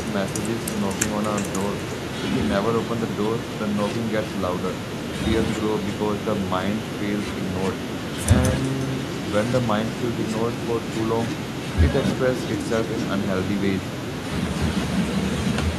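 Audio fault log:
throughout, echo with no canceller: every stretch of speech comes back around 0.4 s later as a quieter copy, about 15 dB down, that sounds thin. The far end plays the call over a loudspeaker, its microphone picks that up, and nothing subtracts it before it returns across the network. Room reverberation blurs straight into a decaying tail. This echo is instead a discrete repeat after a clear gap, set by the round-trip delay.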